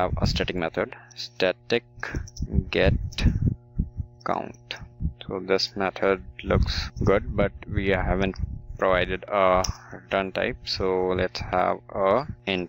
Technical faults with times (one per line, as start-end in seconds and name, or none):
0.00-12.69 mains hum